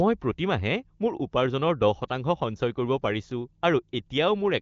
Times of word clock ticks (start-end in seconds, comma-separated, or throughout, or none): none